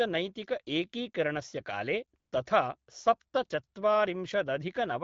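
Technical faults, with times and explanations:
2.19 to 2.31 s, AMR comfort noise: for about 120 ms the phone's voice activity detection decided the talker had gone quiet and stopped sending speech frames, so the receiver generated synthetic noise from a rough sketch of the background's level and spectral shape. The real background drops out and a smooth, steady hiss briefly takes its place before the actual sound returns. The light coding colour of the wideband HD Voice path fits a rate around 12.65 kbit/s.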